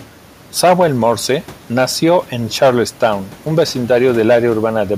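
No technical faults can be heard in the speech; the signal stays intact throughout, with only the room's own background noise sitting about 28 dB below the voice.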